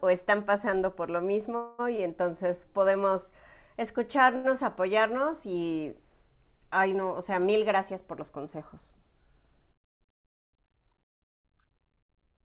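At 1.56 to 1.81 s a call audio freeze, likely from held-up packets, stretches the last sound into a fading buzz for about 225 ms. A spectrogram shows smeared, repeating harmonics there.

Short stalls from late packets follow at 1.97 to 2.00 s (18 ms filled) and 4.36 to 4.46 s (85 ms). Each holds a sound too long, visible as a brief flat, repeated waveform stretch.

From 9.44 to 10.76 s a jitter buffer speed-up trims pitch-period pieces, roughly a tenth of a second in total, so the audio runs 6% faster at unchanged pitch. It sounds hurried, with slightly compressed spacing on the waveform.

Throughout, the spectrogram is empty above 4 kHz, which fits a narrowband G.711-style call codec.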